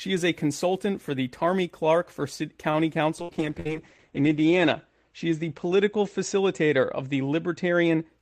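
At 2.71 s there is a short stall from a late packet. A packet arrived late, so the receiver held the last sound for 26 ms. Nothing is lost. Playback resumes from the same point, 26 ms later, with a slight buzz or dip.

From 3.19 s to 8.15 s a call bitrate drop sets in. The encoder falls from 32 to 10 kbps and stays at its lowest for 1.25 s. Bandwidth shrinks from 20 kHz to 8 kHz. The speech turns muffled and coarse.

Two bursts of packet loss fall inside that stretch, at 3.22 to 3.31 s and 3.60 to 3.68 s. Each time the receiver stretched the last sound for about 60 ms and 53 ms, fading it out. Then speech jumps ahead, with about 60 ms missing.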